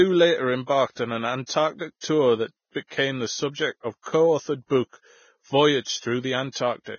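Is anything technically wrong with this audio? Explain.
Yes. Throughout the speech there is heavy lossy-codec damage, most likely Vorbis compression, and at four points attacks are preceded by pre-echo.

The Vorbis-style damage runs the full length. Nothing remains above 6.6 kHz, and the treble below that is quantised so coarsely that fine detail turns into grainy, hissy noise, which fits a very low bitrate of roughly 17 kbps. Tones sound roughened and attacks blurred. On a spectrogram there is a hard ceiling at 6.6 kHz, with speckled, smeared energy beneath it.

Pre-echo appears at 0.91–0.97 s (58 ms), 1.46–1.49 s (27 ms), 2.01–2.03 s (27 ms) and 6.52–6.55 s (34 ms). Each time, a sharp onset sits late in a transform block, and the quantisation noise sized for that loud onset spreads back into the quiet moment before it. The result is a brief hiss ahead of a softened attack. On a waveform a low fuzz rises before the transient, and a spectrogram shows a broadband smear just ahead of the onset.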